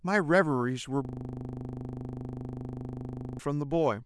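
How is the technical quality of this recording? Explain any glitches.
The recording has one serious fault: a system hang loop running from 1.05 s to 3.39 s. For over two seconds the speech stops progressing, and a single 40 ms slice of audio repeats 59 times. This happens when the computer or audio driver freezes while the sound hardware keeps replaying the same stretch of its ring buffer, which points to a buffer about 40 ms long. The exact repetition at 25 Hz produces a harsh, rapid stutter close to a low buzz.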